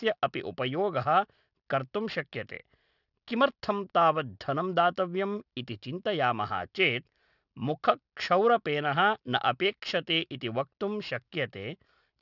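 Aliasing runs through the whole clip. The speech was taken down to a lower sample rate with no filter first. The sound fits a drop to 12 kHz, folding at 6 kHz. Energy above that edge mirrors back below it at wrong frequencies. Sibilants turn gritty and metallic. The spectrum runs hard up to 6 kHz and stops. The folded content sits roughly 25 dB under the speech.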